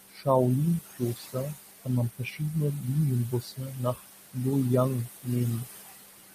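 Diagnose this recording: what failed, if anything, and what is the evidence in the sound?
The background pumps down between phrases and swells under the speech. These are noise suppressor artifacts from call processing: frame by frame it cuts bands judged to be steady noise, here by about 19 dB, with room noise about 9 dB under the speech.

Parts of the speech sound swallowed and faint at 0.09–0.27, 0.85–1.36, 2.1–2.41, 3.31–3.79, 3.95–4.05 and 5.06–5.28 s, dropping by about 16 to 22 dB. This is speech cut by the noise suppressor: call processing mistook quiet speech energy for noise and turned it down.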